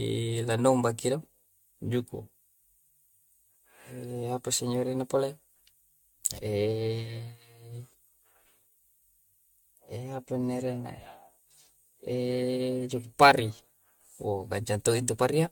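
Generation loss throughout: the speech was likely re-encoded around seven times with a lossy AAC-type codec, leaving it swirly, hollow and smeared, with blurred attacks and nothing above 17.2 kHz.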